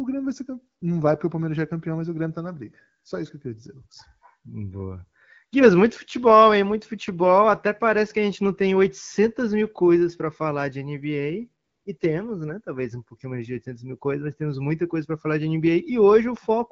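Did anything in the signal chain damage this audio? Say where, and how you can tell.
Yes. The damage is in the codec's discontinuous transmission, heard as AMR comfort noise. At 0.79 s, between "vai ser campeão" and "não vai porque o", the real background briefly gives way to a smooth, steady hiss. It happens again from 11.63 to 11.85 s and at 11.97 s. The sender judged those moments silent and stopped sending speech frames, so the receiver synthesised noise from a coarse level-and-spectrum description. Unlike packet loss, nothing stutters or repeats, and unlike a noise gate, the gaps are filled rather than dead.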